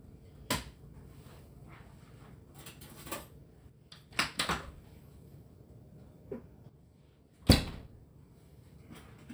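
From 3.70 to 4.11 s and again from 6.69 to 7.73 s, the sound abruptly drops about 6 dB, likely one channel dropping out, leaving a step down in the waveform envelope.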